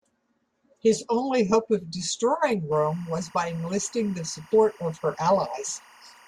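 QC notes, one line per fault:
2.72 s to end, timecode bleed: right after "only hope of destroying", a steady chirping warble sits far beneath the speech, about 30 dB down. Linear timecode at 23.976 frames per second is leaking from an adjacent track or cable, its square wave flipping between roughly 1 and 2 kHz.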